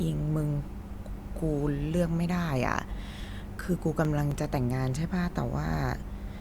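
A speech recording carrying CD scratch ticks: eleven short clicks between 3.52 and 4.84 s, repeating at roughly eight per second, each lasting only a few milliseconds. A surface blemish defeats error correction once per disc revolution, and the player conceals the lost samples, leaving brief ticks.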